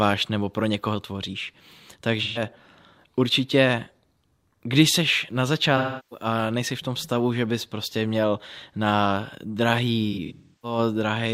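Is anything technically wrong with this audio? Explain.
Yes. There is AAC frame loss with concealment at 2.23–2.42 s, 5.77–6.26 s and 10.12–10.78 s. Roughly 128 ms, 341 ms and 384 ms of audio are missing, and in the last case the gaps are spread over about 0.5 s, with the longest around 0.3 s. In each gap the decoder rebuilds the missing audio from the last good spectrum, fading it out if the loss goes on long enough.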